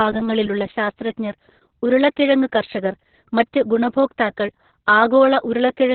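Throughout, the speech sounds muffled, hoarse and faintly robotic, with nothing above 4.3 kHz: heavy Opus voice compression in narrowband SILK mode, which fits a bitrate near 6 kbps.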